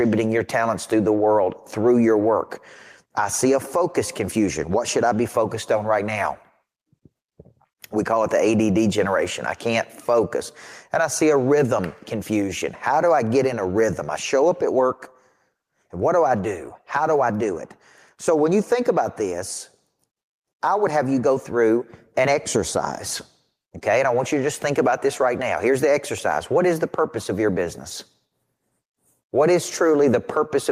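Speech throughout, and the whole 31 seconds has gain pumping: the level ducks by around 5 dB each time the speaker gets loud. That squashes the dynamics, and the likely cause is input gain set too hot with a fast limiter clamping down.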